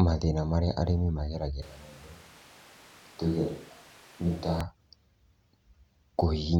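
A switch to a distant microphone runs from 1.62 to 4.61 s, right after "marĩa arĩmi". The speech abruptly turns roomy, hollow and bass-light, about 5 dB quieter, with room noise roughly 25 dB below it, likely because the close microphone dropped out.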